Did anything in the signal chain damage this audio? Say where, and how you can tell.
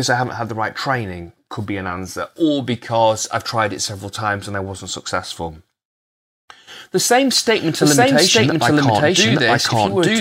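Yes. From 7.37 s to the end of the speech, a doubled audio track appears: a second full-band copy of the same speech runs about a second behind the original, at roughly the same level, with no decay or room colouring, and it switches in abruptly. That points to the driver or buffer stage or an edit, most likely the same signal captured twice through a slower path, leaving two copies mixed out of step rather than any acoustic echo.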